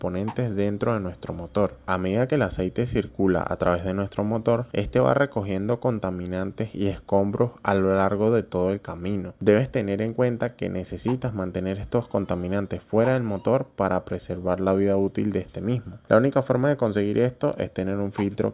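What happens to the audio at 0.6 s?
Nothing goes wrong at 0.6 s; the audio plays through that moment intact, with no dropout, click or distortion.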